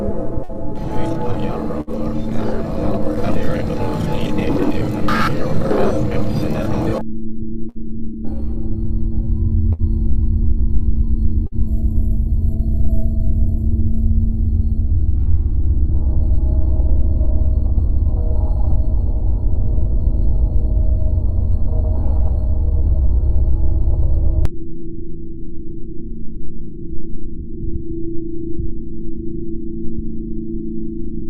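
Runs of packets were lost or arrived too late at 0.43, 1.81, 7.69, 9.73 and 11.47 s, each a burst of packet loss. For 50 to 60 ms the receiver stretched and faded the last sound into a held buzz or hiss, then jumped ahead with about 60 ms missing.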